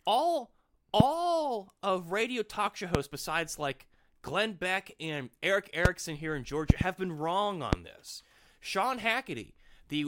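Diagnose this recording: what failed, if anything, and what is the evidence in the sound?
Loud pops sit on top of the speech at 1.00–1.03, 2.95–2.97, 5.85–5.88, 7.73–7.75 s, with a double pop across 6.70–6.83 s. Each peaks around 25 dB above the speech, which continues underneath. The likely cause is an electrical step or pulse in the analogue wiring, such as a loose plug or static discharge. On a waveform each shows as a tall isolated spike. On a spectrogram each is a thin vertical broadband stripe.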